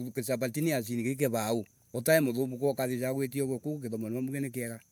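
No technical faults can be heard in this speech.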